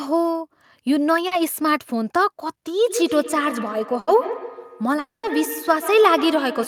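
At 1.27 to 1.34 s, a short concealed packet loss occurs: about 40 ms of the stream failed to reach the decoder in time, and the receiver covered the hole by extending the preceding sound and then blending back into the real signal. What you hear is a brief smear or wobble in the speech, with those 40 ms replaced by a continuation rather than the original audio.

From 2.85 s to the end, there is feedback echo between two devices. A second device on the same call in the same room is replaying this microphone's signal, the microphone picks it up again, and neither echo canceller removes the other device's output. The speech returns as thin, ringing repeats roughly every 150 ms, peaking at about 11 dB below the direct speech, layered under everything that follows.

At 3.99 to 4.10 s, a burst of packet loss cuts out about 80 ms in a row. The receiver stretched the last sound across the gap and faded it, so a held buzz or fading hiss replaces the speech. 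The talk then resumes slightly further on, with those 80 ms gone.

At 4.99 to 5.26 s, the audio stops for a longer stretch, likely a long network dropout in which nothing arrived. The receiver first continues the last sound as a fading buzz or hiss, which dies into about 150 ms of silence. The speech then returns further on, and roughly a quarter of a second of it is missing.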